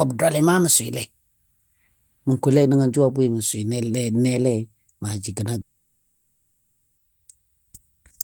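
From 5.61 to 6.99 s, a long network dropout likely cut off the incoming stream, and 1.36 s of speech never arrived. The receiver drew the last sound out into a fading buzz or hiss, then 0.56 s of silence, before speech resumes beyond the lost stretch.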